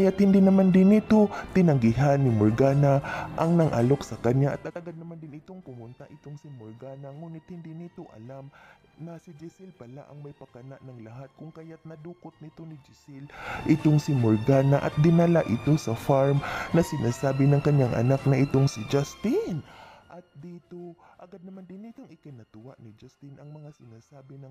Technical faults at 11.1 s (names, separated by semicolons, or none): none